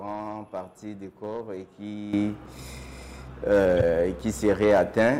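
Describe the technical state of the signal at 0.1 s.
At 0.1 s the signal is intact, with no dropout, distortion or other technical fault to be heard.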